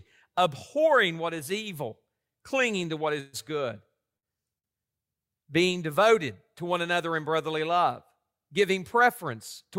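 At 3.20 s the packet stream likely stalled in transit, so the jitter buffer emptied and the receiver had nothing new to play. This call audio freeze runs to 3.36 s: the last sound is extended as a fading buzz-like fill for about 131 ms, with no silence. When the packets resume, playback picks up exactly where it left off. Nothing is lost, but the rest of the audio now arrives 131 ms later than before.

From 4.17 to 4.26 s there is a burst of packet loss. Roughly 60 ms of audio either never arrived or came too late to use. The receiver covered the hole with about 54 ms of the previous sound, held and turned down, which gives a brief fading buzz or hiss. Playback then resumes further along, so the stretch in between is simply missing, and the sound jumps forward slightly.

At 4.59 s a single packet missed its playout time, producing a short stall from a late packet that lasts until 4.67 s. 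The buffer ran dry, so the receiver stretched the sound already playing by about 52 ms, then continued from the same point once the packet turned up. Nothing is skipped. Instead, one sound lingers too long with a faint buzz or dip, and the delay grows by another 52 ms.

From 5.77 to 7.53 s a jitter buffer speed-up is under way. The buffer held more audio than it aims for, so the receiver trimmed tiny pitch-period-sized slices again and again to bring the delay back down, removing somewhere around 50 ms in total. Playback runs about 3% fast while the pitch stays the same. The same correction returns from 9.01 s to the end at 9.79 s, this time about 5% fast, again shedding roughly 50 ms.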